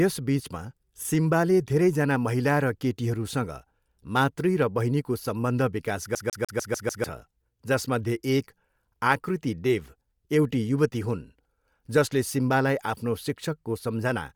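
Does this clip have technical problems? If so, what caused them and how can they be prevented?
Yes, two problems. Throughout the speech there's a breathy, grainy coarseness to the top end, likely Bluetooth LC3 compression running at a fairly low rate, something like 48 kbps, so the encoder strips much of the upper spectrum and fills it back in with noise. Sending the audio over a wired link, or forcing a higher-quality LC3 setting, would avoid it.

From 6.15 to 7.04 s you get the classic CD stuck on one turn: a scratch keeps kicking the laser back a track, so the same 148 ms snippet plays six times, with a tiny mute at each jump. Ripping from a clean disc with an error-correcting ripper would prevent that.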